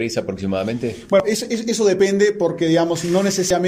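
Damaged data in a compressed stream: corrupted bytes make the decoder misread frames and lose sync until it finds the next frame header. This produces a brief blip at 1.20 s, then a much longer glitch from 3.50 to 3.54 s.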